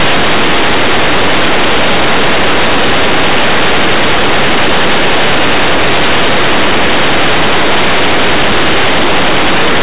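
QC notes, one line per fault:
Throughout: linear audio read as companded. Plain linear 8-bit samples are being expanded as mu-law codes, so small values just on one side of zero become the largest outputs while their opposites stay tiny, turning the speech into very loud, harsh distortion.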